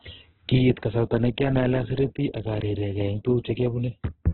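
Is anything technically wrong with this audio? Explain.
Yes. Throughout the speech, likely Opus compression at a very low rate, which fits about 8 kbps in music mode: starved bands are filled with noise, leaving grainy, rough speech with nothing above 4.4 kHz.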